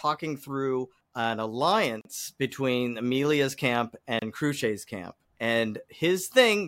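Speech, with two brief dropouts, one at 2.01 s lasting about 39 ms and one at 4.19 s lasting about 28 ms. Each is a gap at a join of encoded pieces: separately encoded chunks were butted together untrimmed, so encoder start delay and end-frame padding leave short silences with smeared edges before the audio resumes.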